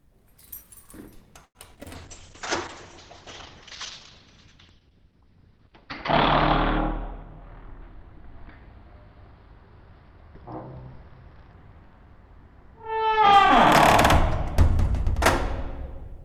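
At 1.45 s a packet arrived late and the jitter buffer ran dry, so the receiver held the last sound for about 96 ms until it came in. This short stall from a late packet loses nothing, but it leaves a brief unnatural hold in the audio before it picks up again.

Two packets were then lost outright, around 1.75 s and 1.83 s, each about 20 ms. In both cases of short concealed packet loss, the decoder extended the preceding sound to cover the gap, producing two quick smears or wobbles close together.

From 1.96 s to 13.39 s the call bitrate drop sets in. The bandwidth estimate fell and the encoder was starved of bits, which suggests a fall from around 48 kbps to roughly 8 kbps. The top end is cut from 20 kHz down to 6 kHz, and the sound turns dull, muffled and somewhat watery. It is at its coarsest for about 4.4 s.

Between 7.03 s and 8.62 s, inside that stretch, the jitter buffer had built up extra delay and trimmed it by cutting tiny pitch-period slices, removing roughly 40 ms in total. 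This jitter buffer speed-up plays the audio about 2% fast at unchanged pitch.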